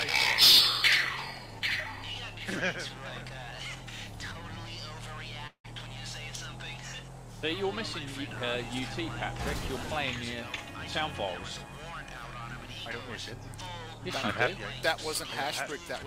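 Packets were likely delayed and the jitter buffer ran dry, causing a call audio freeze at 5.47–5.66 s: the last sound continues as a fading buzz into brief silence, then the audio resumes about 170 ms late with nothing lost.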